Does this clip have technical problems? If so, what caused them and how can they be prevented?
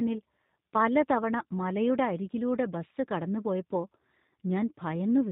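Yes. Throughout the speech the G.729 codec damage is plainly audible: nothing above 4 kHz survives, and the voice has a rough, slightly synthetic buzz because each 10 ms frame is rebuilt from a vocal tract model, a pitch predictor and a few pulses, which fits an 8 kbit/s G.729A stream. Simple band-limiting would sound muffled but clean, so this buzzy texture points to the codec. Prevent it by negotiating a wideband codec such as Opus or G.722.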